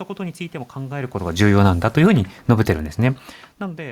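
From 1.26 s to 3.34 s, automatic gain falling pulls the level down by about 3 dB as the gain control reacts to input it judged too loud or too noisy. Speech and room noise sink together, unlike the talker's own level shifts near 1 s and 3 s.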